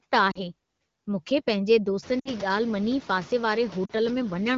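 Noise suppressor artifacts run throughout the speech. The suppressor pulls steady noise down by about 17 dB between phrases, most noticeable after the room noise rises near 2 s.

Lost AMR speech frames cause brief gaps at 0.31 to 0.41 s, 2.19 to 2.29 s and 3.85 to 3.92 s. Each sounds like a short dip to near silence as the decoder stretches the last good sound with falling gain, about 40 ms, 60 ms and 40 ms long.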